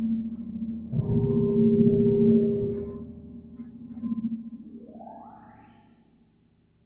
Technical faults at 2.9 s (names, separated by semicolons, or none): noise suppressor applied to music or sounds